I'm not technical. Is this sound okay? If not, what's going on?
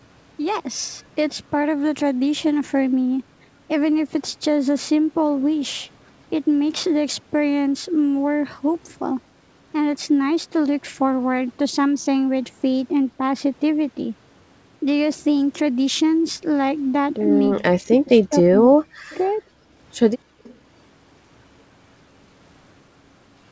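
No. From 17.53 to 19.42 s the talker's voice fades and cuts out in pieces, likely speech suppressed in double talk: both sides spoke at once, so the echo canceller turned the voice down too. From 20.24 to 20.43 s only the room sound drops away briefly. That's background gated by the echo canceller while the other side played through the loudspeaker. Right after, from 20.43 to 20.56 s, a faint copy of the voice returns about 0.29 s late, likely an echo leak: a repeat of the sound rather than a loss of it.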